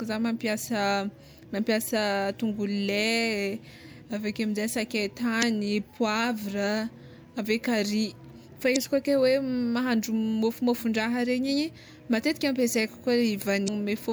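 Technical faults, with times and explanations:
5.39 to 5.44 s, 8.73 to 8.77 s (just after "ave kary fa") and 13.65 to 13.69 s: damaged data in a compressed stream. Corrupted bytes make the decoder misread frames and lose sync for roughly 40 to 50 ms each time, so the speech breaks briefly.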